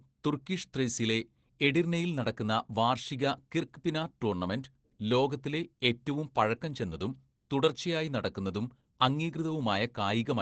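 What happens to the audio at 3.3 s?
At 3.3 s the speech sounds muffled, hoarse and faintly robotic, as it does throughout: Opus voice compression, whose SILK coder caps the band at 8 kHz and coarsely codes excitation, consistent with roughly 12 kbps.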